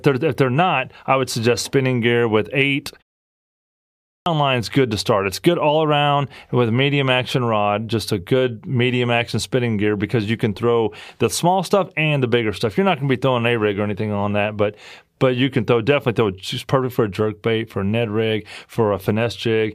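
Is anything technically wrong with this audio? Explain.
Yes. A clipped start after a pause at 3.96 s: the output device slept through the 1.0 s silence and needed 0.30 s to wake, so speech bursts in abruptly at "line is good to", its opening swallowed.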